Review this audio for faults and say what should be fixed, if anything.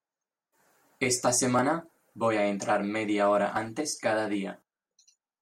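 The speech jumps abruptly at 1.59 s and 3.57 s, each losing about 20 ms. Audio missing between chunks is the likely cause, with pieces dropped at roughly 2 s boundaries and the edges butted together. On a waveform or spectrogram, each jump appears as a sharp vertical seam where the contours break. To prevent it, make the chunk handover gapless by overlapping or double-buffering the chunks.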